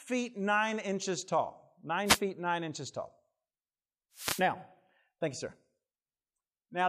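At 2.05 to 2.20 s, a short swish of static cuts across the speech. At 4.13 to 4.45 s, a longer burst follows. Both are wireless microphone noise hits. The FM radio signal faded, and receiver noise rose over the voice.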